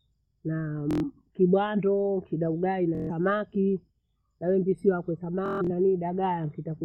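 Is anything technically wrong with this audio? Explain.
Yes. The speech has Bluetooth stutter at 0.91 to 1.04 s, 2.95 to 3.11 s and 5.46 to 5.70 s. In each case the wireless link dropped or delayed packets, and the receiver replayed its last short slice until fresh data arrived. The result is a buzzy, machine-gun repeat replacing about 116, 139 and 186 ms of audio, with the last gap scattered over roughly 230 ms. The speech then resumes further on, not where it stopped. On a waveform these spans show identical repeating blocks. A spectrogram shows them as narrow, comb-like vertical stripes.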